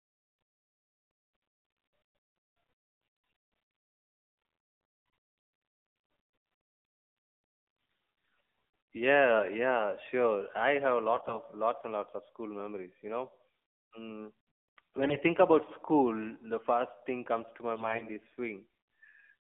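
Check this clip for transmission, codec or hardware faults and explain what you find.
Two faults are present in this speech clip: mobile-codec coloration throughout and three brief bursts of corruption.

The speech sounds thin, buzzy and synthetic from start to finish, confined to roughly 200 Hz to 3.5 kHz. This is the AMR narrowband mobile codec. It rebuilds the voice from a vocal-tract model fed by sparse pulses, and the plainly audible damage fits a low mode around 7.4 kbps.

At 11.14–11.38 s, 15.02–15.20 s and 17.75–18.11 s, the speech turns hoarse, scratchy and gargly while roughly keeping its pitch and level. These are AMR bit errors. A few percent of the weakly protected frame bits arrived flipped, which misplaced the excitation pulses and skewed the finer gain and spectral values.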